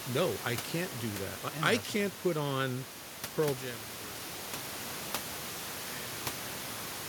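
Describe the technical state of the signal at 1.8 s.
At 1.8 s the speech signal is intact, with no fault present. The room noise sits about 13 dB below the speech, and any level change there is the smooth, fader-like kind.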